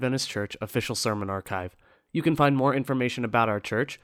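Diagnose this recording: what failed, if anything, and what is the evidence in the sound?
The failure is in the analogue radio link of a wireless microphone, ahead of any conversion. A wireless microphone noise hit appears from 0.68 to 0.72 s, a burst of static about 40 ms long. The FM carrier momentarily faded as reflected paths cancelled the direct signal, so the receiver's own noise rose through the demodulated audio until the signal recovered.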